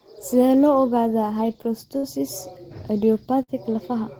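At 1.97 to 2.05 s and again at 3.43 to 3.50 s, a burst of packet loss drops about 60 ms of speech; the receiver stretches the last sound for about 50 ms and fades it, which shows as smeared, darkening spectrogram bands and a tapering waveform before the audio abruptly jumps ahead.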